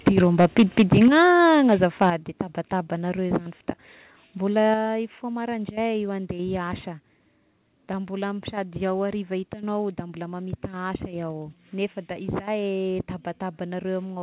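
Microphone overload runs from 0.07 to 1.23 s. The likely cause is an input level pushed about 12 dB past what the converter could hold, so the tops of the loudest waveform peaks are flattened. With a few percent of the signal sheared off, the speech takes on a harsh, gritty crackle on every strong syllable. The narrowband call path, with nothing above 4 kHz, fits a G.711-style codec.

Microphone volume stepped down happens four times, at 0.08, 1.08, 2.1 and 4.74 s, with drops of about 2, 6, 7 and 5 dB. Each is likely the call software's automatic gain control reacting to a microphone that was too loud or clipping and cutting the device's input level in a single jump. Speech and background noise fall together, abruptly, with no fade.

A second, milder microphone overload spans 1.49 to 2.06 s. Here the level is only about 2 dB over the limit and under one percent of the signal is clipped, so the crackle is brief and lighter, catching just the sharpest peaks. 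It sits between two of the gain drops, and the 2.1 s step follows it closely.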